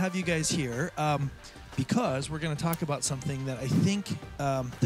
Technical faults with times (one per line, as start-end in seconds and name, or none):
2.73 electrical switching spike